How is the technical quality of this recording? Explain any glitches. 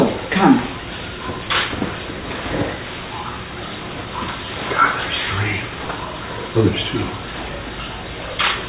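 No glitches can be heard anywhere in the recording. The audio runs without interruption or any disturbance that would need explaining.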